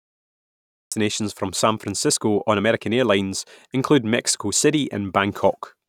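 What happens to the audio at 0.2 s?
At 0.2 s there is nothing to hear: it falls inside a cut-off start, where the clip holds digital silence from the beginning until about 0.92 s and then the speech enters abruptly, mid-sound, with no natural attack or fade-in. Capture began after the talker had already started, so the opening is simply missing. Unlike a dropout, which interrupts audio that is present on both sides, this gap has no sound before it.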